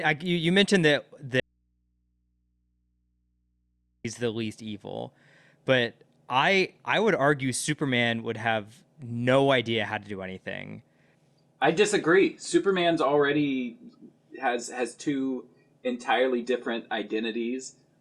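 The audio has an abrupt dropout to a faint residue from 1.40 s to 4.05 s, losing about 2.65 s of signal. During the gap only mains hum remains, roughly 45 dB below the normal level, most likely because the source connection broke while the path after it stayed live and picked up hum on the open input. On a waveform the envelope collapses to a thin band with sharp edges at both ends. A spectrogram shows a sudden blank stretch crossed only by steady low-frequency hum lines.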